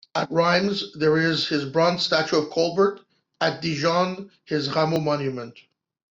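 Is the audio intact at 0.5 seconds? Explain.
No. At 0.54 s there is a dropped buffer (overrun). It is heard as a jump where the speech skips ahead. No silence fills the gap. Only a few milliseconds go missing, too little to take away part of a word. The likely cause is that the program failed to read its samples before the hardware overwrote them. That stretch of audio was lost, and the sound on either side was joined directly.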